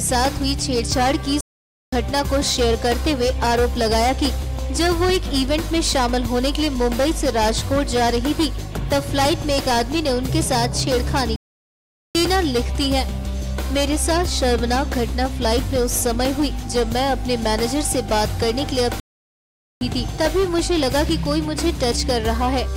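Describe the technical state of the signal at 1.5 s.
At 1.5 s the output is silent: the sound cuts off mid-flow at 1.41 s and stays dead for about 0.52 s before resuming at 1.93 s. This is a playback stall, likely the player running short of data or its thread being blocked until it recovered.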